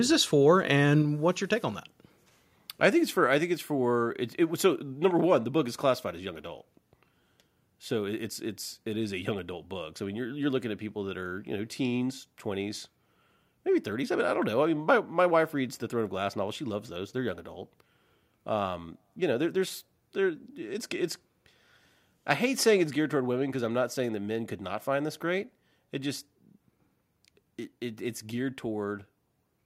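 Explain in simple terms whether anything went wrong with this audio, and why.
The speech suddenly gets quieter three times: at 1.02 s after "this for", at 3.27 s after "I think it's for", and at 22.86 s after "I hate saying". These are microphone volume stepped down events, likely from call software lowering the microphone's input level.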